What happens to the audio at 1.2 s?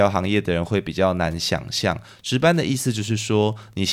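Wi-Fi interference runs through 1.2 s and the whole clip: a nearby radio's beacon, rectified every 102.4 ms, ticks faintly under the speech, about ten times a second.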